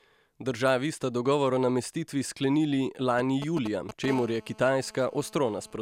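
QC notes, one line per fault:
3.19–4.06 s: GSM signalling bursts. A nearby 2G handset is exchanging short signalling traffic with the network, and the audio circuitry rectifies its radio pulses, so the speech carries a galloping dit-dit-dit of ticks and brief buzzes at roughly 10 dB below the signal. Each group is pulsed at 217 Hz. On a spectrogram it shows as short clusters of vertical broadband striations with a 217 Hz harmonic comb. The waveform shows bursts of sharp spikes between gaps.
4.08–5.77 s: GSM phone buzz. The handset moves into a call and transmits continuously at 217 bursts per second. Rectification of that pulse train produces a hard, raspy buzz at 217 Hz that has nothing to do with the speech, sitting about 20 dB below it. A spectrogram shows an unbroken ladder of evenly spaced harmonics from 217 Hz up into the kHz range. The waveform carries a regular comb of spikes every 4.6 ms.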